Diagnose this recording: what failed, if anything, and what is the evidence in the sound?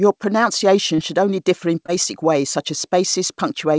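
Short concealed packet loss, network stage: at 0.96 s, before "should only differ in", and 1.86 s, before "ways such as", about 20 ms went missing and was bridged by continuing the preceding sound. That leaves brief smears, not the silent gap or click of a buffer underrun.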